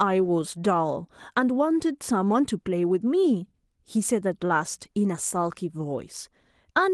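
No technical faults heard.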